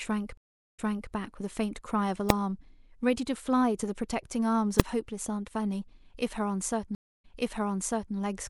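It's a speech clip with two stream reconnects. At 0.37 s the audio drops out for about 407 ms, then picks up again about 0.34 s earlier than where it broke off, so you hear a bit repeated, settling by 1.12 s. The same thing happens at 6.95 s, with 286 ms of silence and a jump back of about 0.91 s, running to 8.15 s. That's the connection failing, the player reconnecting and starting a fresh decoder, and the server resending a burst. Separately, there are two sharp bangs from invalid numbers at full scale, at 2.30 s (a 0.67 ms block) and 4.80 s (1.33 ms). A calculation blew up to infinite or invalid values that got pinned to maximum output, and the blocks are too short to hear as anything but a single crack.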